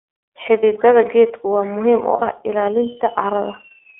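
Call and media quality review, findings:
iLBC codec throughout: band-limited to 300 Hz to 3.6 kHz, rough, synthetic speech texture, fitting the 13.33 kbps 30 ms mode. Unlike heavier codecs, there is no smearing across frames.

Lost iLBC frames at 0.59 s and 2.16 s: brief held buzzy vowel, fitting one then two lost 30 ms frames. Concealment repeats the pitch cycle, and speech recovers immediately rather than ramping back.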